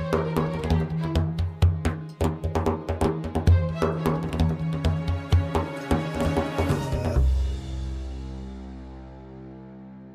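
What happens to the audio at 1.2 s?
Nothing goes wrong at 1.2 s: the audio plays through that moment intact, with no dropout, click or distortion.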